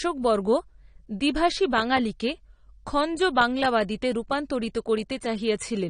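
Throughout the speech, the sound is plainly dulled, with nothing above 9.7 kHz and clearly audible codec damage. The likely cause is AAC compression: AAC-LC at a rate that fits about 32 kbps quantises frequency lines coarsely, lowering the cut-off.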